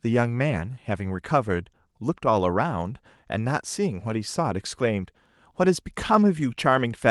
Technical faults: none

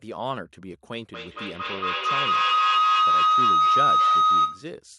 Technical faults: feedback howl

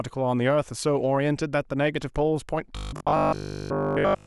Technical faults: robotic sound from repeated short buffers

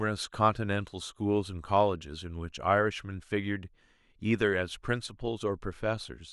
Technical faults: none

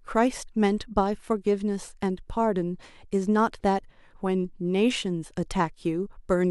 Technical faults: none

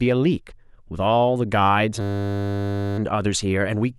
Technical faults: system hang loop

